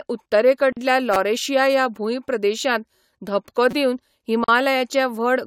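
At 0.73 s the speech drops into a silence of about 43 ms, its edges smeared, then resumes where it stopped. This is a gap at a join of encoded pieces: separately encoded segments were spliced without trimming the encoder's start delay and final-frame padding. The same 42 ms gap recurs at 4.44 to 4.48 s.

From 1.14 to 1.16 s, just before "ह्या भूंयप्रदेशांत धपको", a brief buzzy stutter sounds. This is a repeated buffer: a roughly 5.3 ms chunk, which fits a 256-sample buffer, played four extra times when new audio arrived late, losing about 20 ms. The same stutter occurs at 3.71 to 3.73 s, right after "ह्या भूंयप्रदेशांत धपको".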